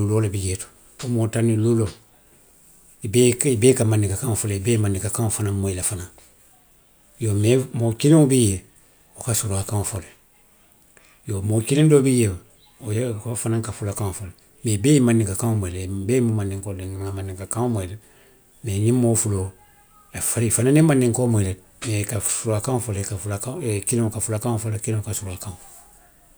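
Periodic USB or driver dropouts, 5.96 to 10.96 s, in this speech recording: a blocking background task cuts roughly half-millisecond silent gaps once per second, heard as regular ticks.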